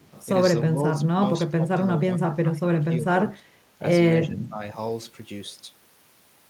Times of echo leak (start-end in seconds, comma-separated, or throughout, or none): 0.00-0.12